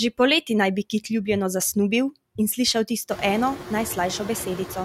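From the start and throughout, noise suppressor artifacts are present: the suppressor treats steady background as noise and pulls it down by about 19 dB, frame by frame across frequency bands, so the noise sinks in pauses and resurfaces beneath the speech. The room noise climbs by about 21 dB around three seconds, sitting about 13 dB under the speech. Unlike a noise gate, which mutes everything at once, this cuts band by band.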